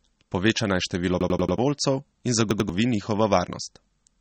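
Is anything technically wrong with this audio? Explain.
Yes, there are two problems. Throughout the speech, the audio has likely been through MP3 compression at a low bitrate, which fits about 32 kbps. Short of bits, the encoder cuts everything above 8.4 kHz and drops quieter frequency lines that flicker on and off between frames. The result is plainly audible: dull, watery speech with swirly texture and metallic edges on s sounds.

A repeated buffer occurs twice, when new audio failed to arrive in time and the device replayed its last block, a piece about 93 ms long that fits a 4096-sample buffer. From 1.21 to 1.58 s, just after "naj število", that block plays four extra times, giving a rapid stutter with hard joins and losing about 0.4 s of speech. From 2.51 to 2.69 s it repeats twice more, a shorter stutter that loses about 0.2 s.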